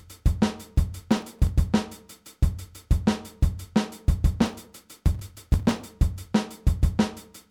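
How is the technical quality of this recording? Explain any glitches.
Two bursts of processor overload crackle mar the recording. The first runs from 1.12 to 1.49 s and the second, longer one from 4.40 to 5.85 s. The processor couldn't finish its very short audio buffers in time, each well under a millisecond, and many deadlines were missed in a row. Each missed buffer was skipped, leaving a tiny hard-edged gap. Strung together, these gaps sound like gritty, tearing crackle over the audio, and the second burst is thick enough to suggest well over a hundred skips.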